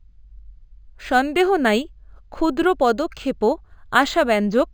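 Throughout the speech, imaging from linear upsampling: straight-line interpolation, likely from about 11 kHz to 44.1 kHz, dulls the top and leaves faint mirrored images between 5.5 kHz and 11 kHz, a metallic shimmer on sibilants.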